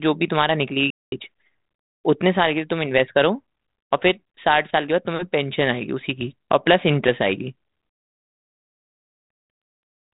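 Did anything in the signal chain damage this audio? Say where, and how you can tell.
Yes, at playback. The speech cuts to silence from 0.90 to 1.12 s, about 217 ms, then resumes. A playback stall, likely from a starved buffer or blocked player thread.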